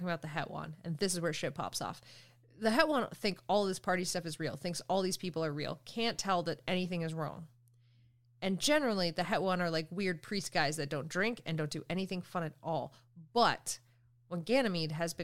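No technical faults can be heard anywhere in the speech recording, and the signal stays continuous and stable throughout.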